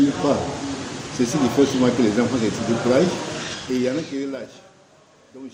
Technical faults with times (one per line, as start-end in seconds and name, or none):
3.37-4.74 zipper noise